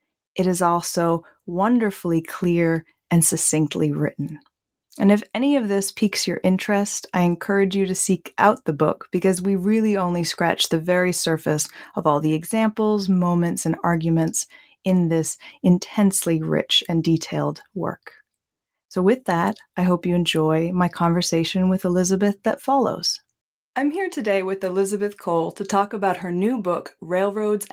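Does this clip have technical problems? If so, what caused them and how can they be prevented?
No, nothing in this speech recording calls for a cause or a preventive fix.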